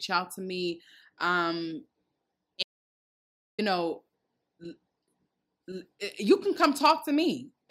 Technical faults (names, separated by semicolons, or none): audio dropout to silence